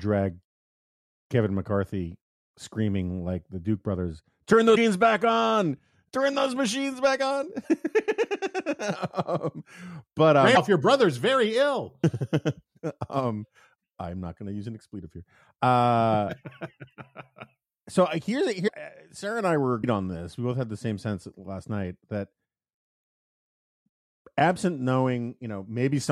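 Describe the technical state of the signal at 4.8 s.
A 30 ms disruption runs from 4.74 to 4.77 s, just before "back on", where the speech skips forward. The likely cause is a broken MP3 bit reservoir: a cut removed frames of roughly 26 ms each, so the next frame reached back for borrowed bits and decoded bytes that belonged to a different frame. A plain dropout would leave a gap and resume at the same point. This one jumps ahead, and the damage spills into the frames after the cut.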